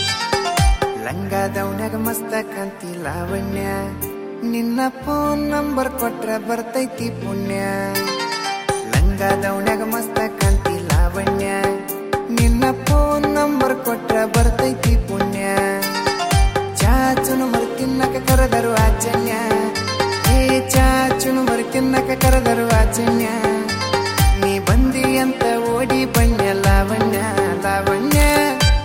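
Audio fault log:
18.30 to 28.36 s, integer overflow: Loud peaks wrap to the opposite sign instead of limiting. Violent cracks land at 18.30 to 18.33, 20.27, 20.76, 22.25 to 22.33, 26.17, and 28.13 to 28.36 s. The last is pushed about 1 dB over. Each flip jumps the full range, so it cracks far harsher than clipping.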